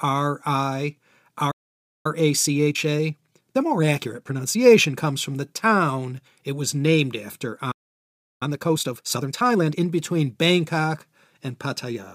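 At 1.51 s the speech cuts out in a playback stall lasting about 0.54 s, most likely because the player ran out of buffered data. The waveform drops to flat silence, and the spectrogram shows an empty vertical band. From 2.06 to 5.06 s, time-compressed catch-up runs at 1.15 times normal speed until "from the town it". The speech sounds slightly hurried but keeps its pitch, and the spectrogram shows harmonics unchanged in frequency but squeezed in time. A second stall follows "it was named after" at 7.71 s, with about 0.69 s of flat-lined waveform. Harder catch-up at 1.5 times speed then runs from 8.43 to 9.81 s, audibly rushed, with tightly packed syllables and small cross-fade seams in the waveform.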